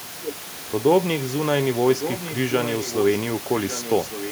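From 1.93 to 3.18 s, and again from 3.52 s to the end, there's an echo leak: a faint second copy of the speech trailing the original by about 1.16 s, sitting roughly 10 dB down, above room noise about 14 dB below the speech. The likely cause is a far end on speakerphone whose echo canceller didn't fully scrub what its mic caught, so that leftover came back down the line.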